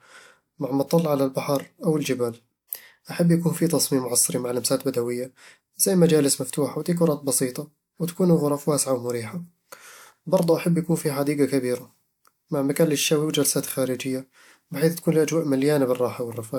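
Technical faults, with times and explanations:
No technical faults detected.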